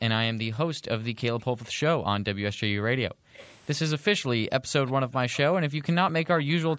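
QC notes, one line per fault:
0.00–0.91 s, 1.45–1.59 s, 1.96–2.24 s, 2.89–3.34 s: background gated by the echo canceller. Room sound drops by up to about 40 dB while the loudspeaker plays, then returns.
1.64–1.69 s, 3.34–3.53 s, 4.87–4.92 s, 5.32–5.39 s: echo leak. Short delayed copies of the far voice return, 239 ms late and about 35 dB down first, then 268 ms and about 25 dB down, likely slipping past the canceller.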